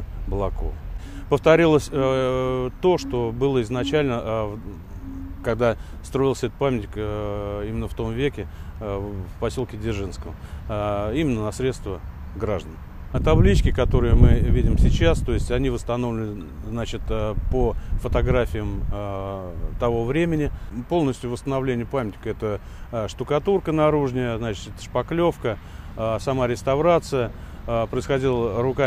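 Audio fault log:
No fault is logged for this audio.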